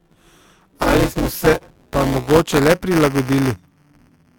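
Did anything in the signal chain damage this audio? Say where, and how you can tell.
Yes: buffer tearing runs throughout the speech, with a steady robotic buzz near 188 Hz that tracks the signal. This points to the driver or buffer stage, where writer and reader cross within each period. Most of each buffer, which fits a 256-sample size, replays audio from about 10 ms earlier.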